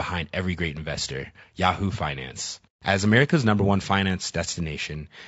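From start to finish, the speech carries plainly audible coding damage: the voice sounds rough and grainy, with a noisy fill between the pitch harmonics instead of clean gaps. This is likely low-delay AAC compression (AAC-ELD), the codec used in video calls. Its short frames resolve the harmonic structure of a voice poorly and spend bits less efficiently, and the degree of damage fits a modest bitrate of around 32 kbps.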